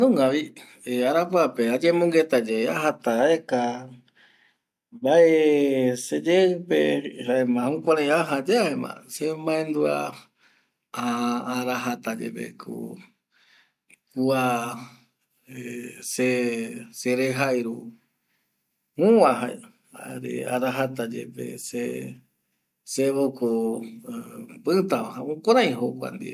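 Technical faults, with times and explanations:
No technical faults can be heard anywhere in the speech recording, and the signal stays continuous across its whole length.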